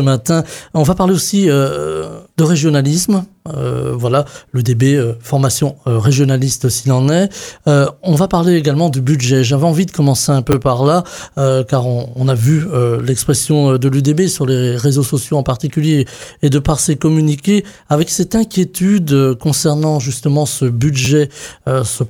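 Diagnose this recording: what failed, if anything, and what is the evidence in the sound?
Repeated buffer, driver stage: brief clicks at 10.52 and 21.05 s, each a segment fitting a 10 ms buffer replayed twice while new audio lagged.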